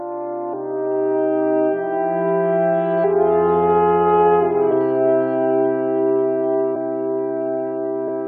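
Compressed frames skipped at 0.52, 3.03, 4.70, 6.75–6.77 and 8.07 s: the audio jumps ahead by roughly 150, 70, 150, 200 and 100 ms, in steps that fit a 23.2 ms frame. Unlike a dropout there is no silent gap.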